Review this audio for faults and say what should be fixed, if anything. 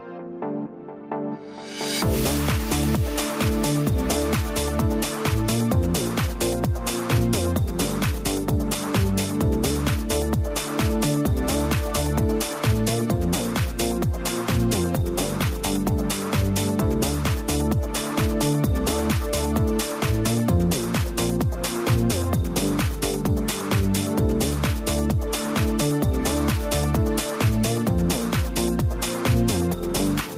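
No faults turned up in this audio, so nothing needs to be fixed.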